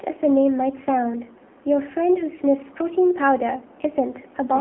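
Throughout, the speech sounds thin, buzzy and synthetic, with nothing above 3.7 kHz. This is AMR narrowband mobile codec damage, which fits a low-rate mode around 7.4 kbps.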